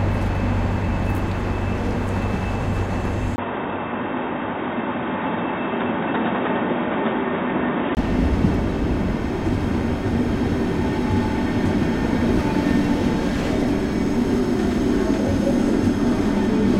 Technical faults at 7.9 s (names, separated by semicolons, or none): input switched to a poorer device